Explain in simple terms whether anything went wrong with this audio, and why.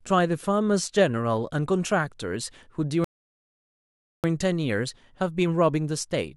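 Something went wrong in the playback: a rebuffering stall. At 3.04 seconds, the player used up all the audio it had downloaded and had to wait for more to arrive. While it waited, the speech simply stopped and there was silence until 4.24 seconds. Then it carried on from exactly the point where it had paused, so nothing was skipped. The only harm is a gap of about 1.2 seconds added in the middle.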